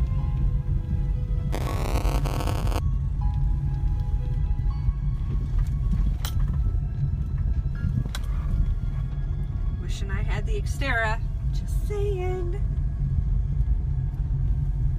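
From 1.52 to 2.79 s there's buffer tearing, a steady robotic buzz at 200 Hz, which points to a buffer period of 5 ms. The writer and the hardware reader have drifted into each other, so roughly a tenth of each buffer replays audio about 20 ms old, with hard joins.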